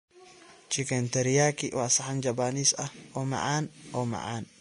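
From start to finish the speech has a hard ceiling near 10.6 kHz, with plainly audible grainy, hissy treble and smeared consonant attacks. This is likely Vorbis compression at a low setting, around 34 kbps, where coarse quantising of the upper residue replaces fine detail with noise.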